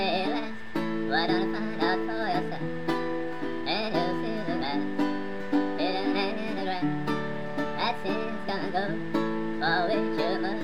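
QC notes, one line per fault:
throughout: wrong sample rate. Everything runs fast and sits high, 1.5 times normal speed and about 7.02 semitones sharp, with tempo and pitch shifted together. That fits audio captured at 32 kHz being played back at 48 kHz without any conversion.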